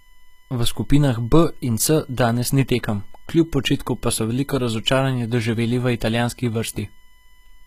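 From start to finish the speech carries USB whine, a steady tone pitched at 1 kHz whose strongest component sits at the 2 kHz harmonic. It comes from the USB bus drawing current in regular 1 ms frames, and that periodic load leaking into the audio path through shared power or ground. The whine sits roughly 40 dB below the speech: quiet, but constant.

Across the whole clip there is also plainly audible codec damage, likely caused by HE-AAC compression at a low bitrate, which fits a rate around 20 kbps. Nothing is present above 14.9 kHz. The treble that remains is not the original but is synthesised by copying lower bands upward and shaping them coarsely. Because that copied upper range no longer lines up harmonically with the lower spectrum, the top end of the speech sounds gritty and metallic.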